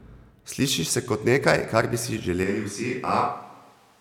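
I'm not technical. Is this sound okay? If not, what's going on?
No. From about 2.44 seconds to the end, the recording likely switches to a distant microphone, so the speech turns hollow, roomy, thinner, somewhat quieter, with more background noise.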